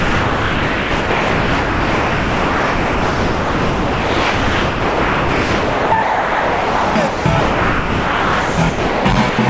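A sender-side voice detector likely judged the sound as background and stopped transmitting, so comfort noise replaces it from 0.0 to 5.92 s, 6.02 to 6.95 s, 7.07 to 7.25 s, 7.40 to 8.57 s, 8.69 to 9.05 s and 9.29 to 9.38 s. These are classic drops by the voice detector, with only brief bursts of real sound between them, band-limited to 8 kHz as from a G.722 call path.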